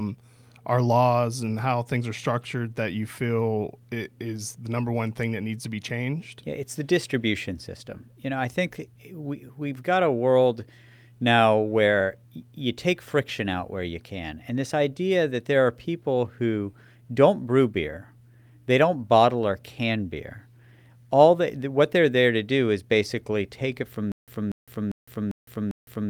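From 24.12 s to the end of the speech, just after "basically take it from", the audio locks into a stutter with silent gaps. A 239 ms fragment plays, gives way to about 160 ms of dead digital silence, then returns, cycling every 398 ms for five repeats. The likely cause is a stalled player or stream that kept replaying its last buffered piece on each retry and then ran dry, so the audio due in that stretch never arrives.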